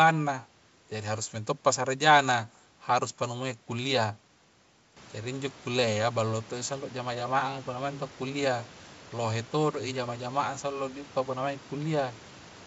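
No technical faults can be heard in this clip: the room noise that rises by about 12 dB around 5 s belongs to the recording itself, and the wideband telephone coding at 64 kbit/s leaves at most a faint trace.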